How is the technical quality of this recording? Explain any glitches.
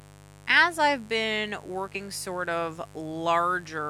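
The recording is compromised by a constant buzz and two brief skips in the speech.

A mains buzz sits under the whole clip, roughly 25 dB below the speech. Switching spikes at 50 Hz mains produce a dense stack of harmonics reaching into the kilohertz range. That makes it a raspy buzz rather than the smooth, low hum of a pure 50 Hz tone.

Compressed frames are skipped at 0.49 s, just before "I've been", and again at 1.94 s, just after "I've been". About 40 ms of audio vanishes at the first point and about 70 ms at the second, which fits two and three frames of roughly 21 ms each. The decoder jumps ahead by the length of the missing frames, so the speech lurches forward at each join.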